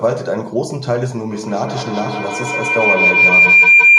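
At 1.30 s a feedback howl begins and runs to the end of the speech. A microphone-to-loudspeaker loop is adding gain on each trip. The sound narrows to a tone around 2 kHz. The loop repeats roughly every 150 ms and the howl peaks about 10 dB above the voice.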